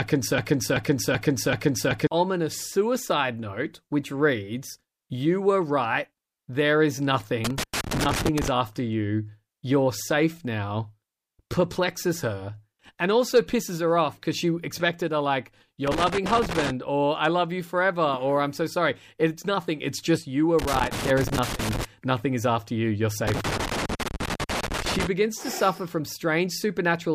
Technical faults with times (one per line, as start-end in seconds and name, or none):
0.00-2.07 broken-record loop
7.45-8.48 loose connector crackle
15.87-16.70 loose connector crackle
20.59-21.85 loose connector crackle
23.27-25.07 loose connector crackle